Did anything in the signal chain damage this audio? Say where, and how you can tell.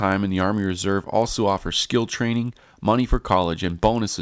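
Yes, at the sample-rate conversion stage: a resampler restarted on every block. Throughout the speech there is a buzz at 50 Hz that rides on the sound and drops away in the gaps, which points to 20 ms blocks. Each block was converted, likely from 24 kHz down to 16 kHz, without the neighbouring samples as filter history, so every block edge picks up a small discontinuity.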